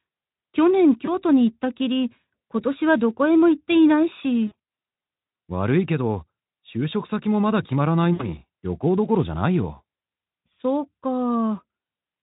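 At 1.05 to 1.15 s, 4.47 to 4.53 s and 8.13 to 8.28 s, VoIP packet loss concealed by the speech codec: about 20 ms, then 100 ms scattered in runs up to 40 ms, then 60 ms went missing. The Speex decoder replays its last pitch and filter at falling gain, giving a brief buzzy or noisy, fading smear. On a spectrogram, harmonics flatten into steady horizontal bands that dim; the waveform shows near-identical repeating cycles shrinking in amplitude.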